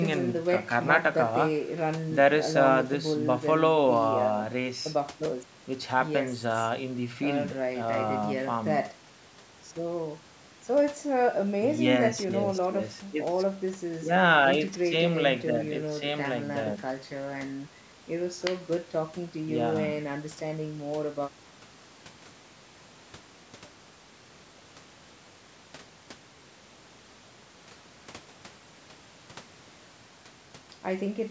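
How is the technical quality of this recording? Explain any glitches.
No glitches: the speech shows only ordinary call microphone processing, with the lowest bass rolled off by its high-pass filter and nothing above 8 kHz, both normal for that path.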